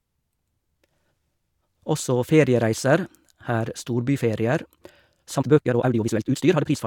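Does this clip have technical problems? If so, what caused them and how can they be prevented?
Yes. Software likely squeezed the ending into a shorter length by dropping short pieces, so a time-stretched section from 5.35 s to 6.87 s runs about 1.97 times faster, rushed at unchanged pitch. Keeping material at its natural length, or trimming pauses instead of compressing time, prevents this.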